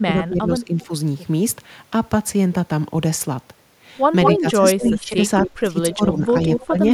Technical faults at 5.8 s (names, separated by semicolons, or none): speech suppressed in double talk